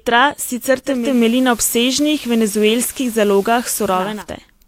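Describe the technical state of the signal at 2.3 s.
At 2.3 s the speech is carried by the analogue FM path: the hybrid receiver has blended from digital radio to analogue, from 0.83 s to 4.27 s, using cross-fades of about 393 ms. Its level differs by about 2 dB from the digital stream, and a steady hiss sits roughly 25 dB below the speech.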